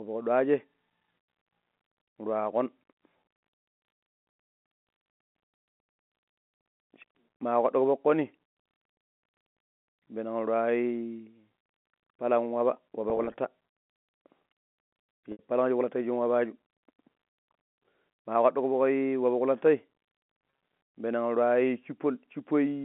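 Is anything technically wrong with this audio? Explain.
Yes, there's packet loss with pitch repetition in three spots: 13.10 to 13.34 s, 15.32 to 15.39 s just before "palan shi kulata", and 20.50 to 20.60 s. Where audio packets dropped out, the receiver filled each gap by looping the last pitch period and fading it down. The gaps are short, about 70 to 110 ms in total, some scattered in runs of 20 to 30 ms, so the scattered ones sound like brief held, buzzy blips, while the unbroken 70 ms gap at 15.32 s fades into silence before the speech cross-fades back in. All of this sits over a normal narrowband telephone line.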